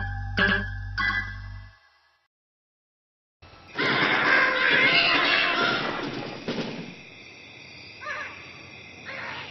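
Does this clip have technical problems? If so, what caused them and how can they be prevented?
Yes. A doubled audio track runs through the whole clip: a second, full-band copy of the sound trails the original by roughly a tenth of a second, sitting around 5 dB lower, with no decay or room colour on it. That fixed offset likely comes from the same source being picked up twice, once through a slower path, or from an edit leaving two misaligned copies stacked. To prevent it, monitor only one capture path and check the session for duplicate regions before bouncing.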